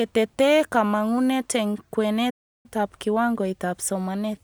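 At 2.30 s, after "kamangunet eng", a playback stall silences the speech for about 0.34 s, likely from starved buffering, showing as a flat waveform gap until 2.66 s.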